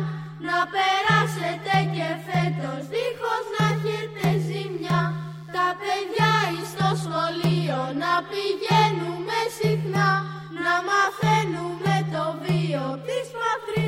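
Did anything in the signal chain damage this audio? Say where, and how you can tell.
Yes. Mains buzz enters in the analogue wiring from 4.19 to 5.69 s: a raspy 60 Hz buzz, well below the signal, whose switching-spike harmonics reach kilohertz, unlike a smooth hum.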